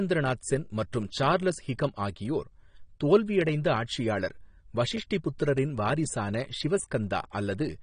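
AAC compression damage runs throughout: the speech stops dead at 9.7 kHz and sounds dull and smeared, with fizzy, warbling sibilants. It likely comes from AAC-LC at a low bitrate, consistent with 32 kbps, where the coder cuts the top band and quantises the rest coarsely.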